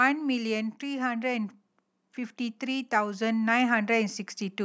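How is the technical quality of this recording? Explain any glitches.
The one glitch is automatic gain rising, from 2.37 s to 4.23 s. Over those two seconds the level climbs by about 5 dB as the call's gain control, judging the input too quiet, turns itself up step by step. Speech and background noise swell together, which separates it from a talker moving closer, where only the voice would grow. The slow ramp also sets it apart from a sudden level jump. The speech stays within the call microphone path, with nothing above 8 kHz.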